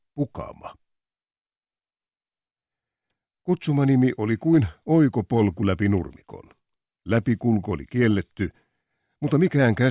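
No technical faults can be heard anywhere in this clip.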